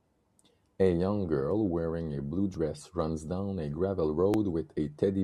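At 2.54 s, between "girl wearing a blue" and "runs down a gravel", a jump in the sound marks a likely dropped buffer (overrun). A few milliseconds of speech are skipped and joined directly, showing as a waveform discontinuity and a thin vertical spectrogram line. A briefer one follows at 4.34 s, after "runs down a gravel".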